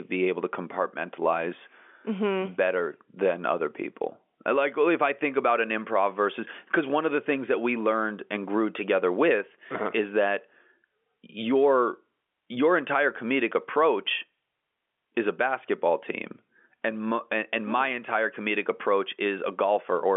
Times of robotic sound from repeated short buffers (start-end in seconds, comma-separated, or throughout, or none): none